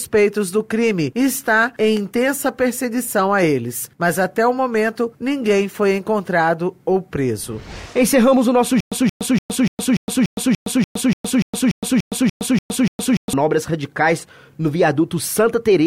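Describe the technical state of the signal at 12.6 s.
At 12.6 s the signal is inside a stutter with silent gaps running from 8.80 to 13.33 s: a 176 ms fragment replays every 291 ms, with 115 ms of digital silence between, likely a stalled stream retrying. Waveform and spectrogram show identical repeating blocks separated by flat, empty gaps.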